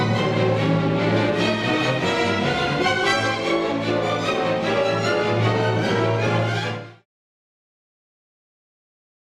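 No faults present; the level tapers smoothly down from around 6.5 s to 7.06 s with no step or click, as an intentional edit.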